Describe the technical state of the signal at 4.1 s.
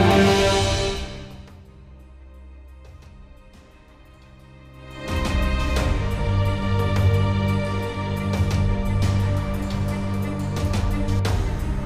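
At 4.1 s the signal is intact, with no audible fault at that point.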